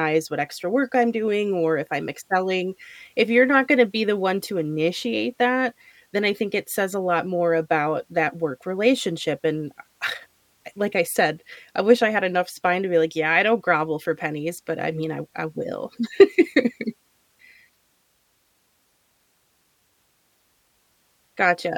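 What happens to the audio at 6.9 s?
Nothing goes wrong at 6.9 s: the speech runs on intact through that moment, with no dropout, click, distortion or other fault to be heard.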